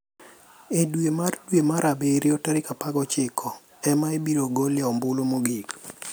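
No faults turn up anywhere in this speech recording; nothing drops out, clicks or warps along the way, so there's nothing to flag.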